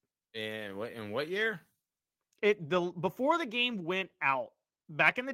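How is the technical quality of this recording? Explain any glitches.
The recording has a timing problem running through the whole speech clip, coming from two linked faults.

Clock drift between sender and receiver is present from start to finish. The sending end's clock runs roughly 3% slow compared with the receiving end, so audio arrives a little slower than it's being played out. The jitter buffer keeps running low, and the receiver has to make up the shortfall somehow. You can't hear the drift itself, but it drives everything that follows.

Repeated timing corrections run from about 0.20 s to 5.05 s. To keep pace with the slow sender, the receiver keeps repeating tiny slices of audio, all in the same direction and at uneven spacing. Over that stretch it pads in something like 150 ms, so the speech plays at about 97% speed. If noticeable at all, it comes across as small hiccups and a slightly dragging, unsteady rhythm.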